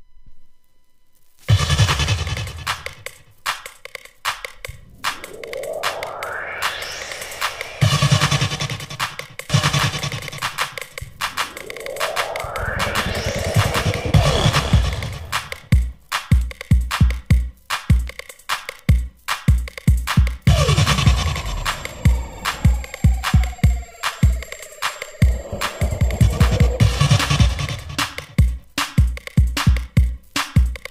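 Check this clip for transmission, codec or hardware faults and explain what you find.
One fault, a doubled audio track, runs from 9.50 to 13.76 s. Most likely a slower second capture path mixed in the same audio, so an unaltered copy trails by about a second and a half at roughly equal loudness, cutting in and out abruptly.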